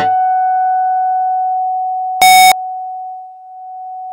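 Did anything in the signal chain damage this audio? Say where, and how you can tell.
Yes. The sample-format conversion stage likely mixed up signed and unsigned, which fits 16-bit samples having their top bit flipped. From 2.22 to 2.52 s the sound becomes very loud, harsh distortion, with every zero crossing jumping across the full range so that quiet material plays as loud as the rest.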